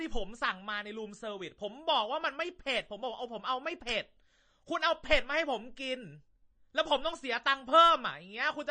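Speech runs the whole clip with plainly audible damage from likely MP3 compression. Nothing sounds above 9 kHz, so the top is dull. Weak detail flickers, giving a watery, swirly texture and chirpy s sounds. That fits a low bitrate near 32 kbps.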